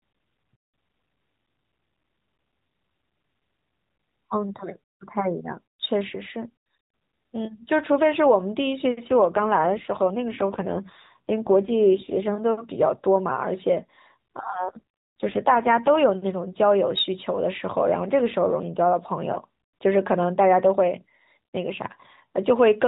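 From 9.08 to 12.32 s and again from 14.54 to 16.01 s, AMR rate drops make the speech rougher and more synthetic, consistent with 12.2 falling to 5.9 kbps. The band and continuity hold.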